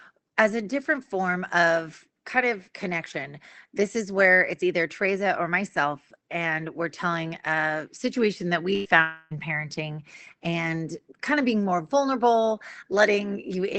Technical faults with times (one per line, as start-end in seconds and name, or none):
8.75-8.87 burst of packet loss
8.85 lost packet rebuilt from error correction
9.02-9.33 long network dropout
9.31-9.43 lost packet rebuilt from error correction
10.12 lost packet rebuilt from error correction
10.42 lost packet rebuilt from error correction